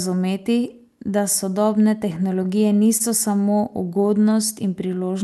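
Repeated stalls (stutter) affect this speech clip from 2.15 to 3.02 s. There are seven brief hesitations, the longest 28 ms, about 78 ms in total. Late packets repeatedly emptied the jitter buffer, and the receiver extended the last sound to bridge each wait, so the speech drags without losing anything.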